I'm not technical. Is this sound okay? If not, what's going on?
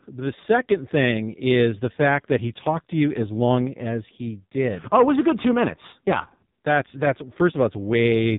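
No. From start to finish, the speech has passed through an AMR narrowband mobile codec, the squeeze an old mobile phone call applies. Everything above about 4 kHz is gone, so it sounds boxed-in and dull. The squeeze here is heavy, so the voice also turns buzzy and robotic. That buzz sets it apart from a simple telephone-style filter, which would sound muffled but still natural.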